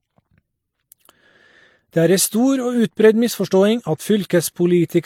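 From start to finish, the speech carries a layered, smeared coarseness, as if two kinds of compression damage were heard together. The likely cause is transcoding between lossy codecs, pointing to an MP3 encode near 54 kbit/s followed by HE-AAC near 48 kbit/s. On a spectrogram the top is sliced off flat at 17.3 kHz, with speckled, blocky holes below.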